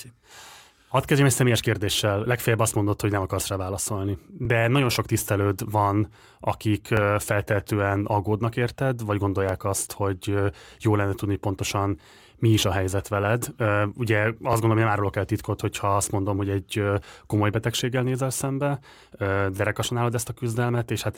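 At 4.45–4.47, 6.97–6.99 and 9.49–9.51 s the speech stutters as overlapping chunks join: each 2.5 s block begins before the last ends, so 20 ms replays. Unlike a dropout, nothing is lost; the brief doubling, evenly spaced, gives it away.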